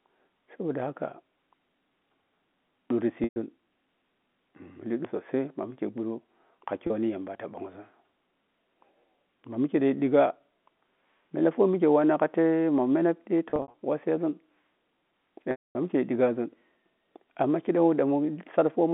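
Speech over a G.711 phone line has packet loss with pitch repetition: held, buzzy bridging at 3.24–3.36 s, 6.87–6.90 s, scattered through 13.50–13.74 s, and fading to silence over 15.51–15.75 s.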